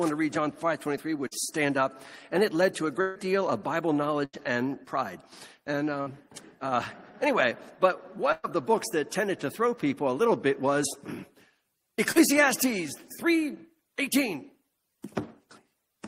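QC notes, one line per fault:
1.27–1.33 s and 12.12–12.18 s: short concealed packet loss. About 40 ms of audio is missing each time, and the receiver patched the hole by extending the preceding sound, which causes a brief smear or wobble. On a spectrogram, a short stretch of frozen, over-smooth harmonics or shaped noise appears. The waveform shows no gap.
3.01–3.17 s, 4.25–4.35 s, 6.01–6.08 s and 8.32–8.46 s: burst of packet loss. Runs of about 140, 80, 60 and 120 ms never arrived. The last sound is held as a decaying buzz or hiss, then playback jumps ahead. On a spectrogram, the partials go flat and fade before an abrupt resumption. The waveform has no silent dropout at 3.01 s or 8.32 s.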